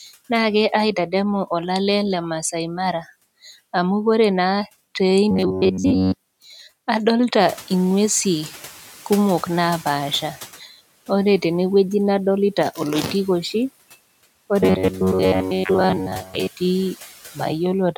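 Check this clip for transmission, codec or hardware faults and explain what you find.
Two kinds of fault are present in this speech recording, one of them occurring twice.

Robotic sound from repeated short buffers, 5.31 to 6.40 s and 14.60 to 16.48 s: the speech becomes a rigid metallic buzz at 93.8 Hz that still loosely tracks the talking. The likely cause is late-arriving audio, with playback looping roughly 10.7 ms chunks and skipping most of the real signal.

Noise suppressor catching up, 7.39 to 10.52 s: when the room noise jumps by about 14 dB around 7.5 s, the suppressor's noise estimate lags. The noise first comes through poorly reduced, then sinks by about 8 dB over 3.13 s as the estimate adapts.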